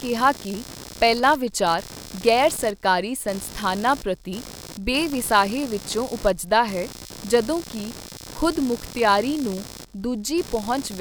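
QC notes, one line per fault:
Throughout, computer activity noise: a buzzing, scratchy pulsing of roughly 70 per second sits about 20 dB under the speech. Processor or mouse load disturbs the shared audio ground.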